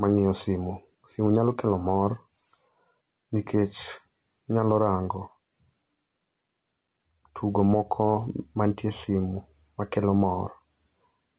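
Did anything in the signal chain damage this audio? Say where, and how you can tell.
Yes. Gain pumping runs through the whole clip: the gain ducks by about 5 dB under each loud syllable. The likely cause is excessive input gain feeding a fast limiter.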